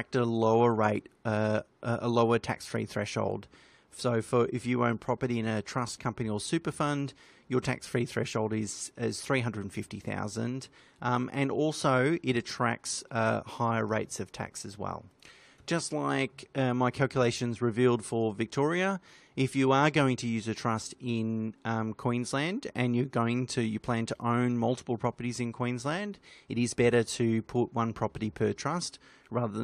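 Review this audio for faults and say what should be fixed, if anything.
No technical faults can be heard anywhere in this speech recording. Nothing in it needs to be fixed.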